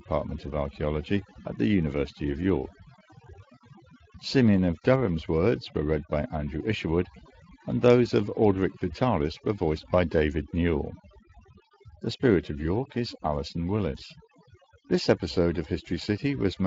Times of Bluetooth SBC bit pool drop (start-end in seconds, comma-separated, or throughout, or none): none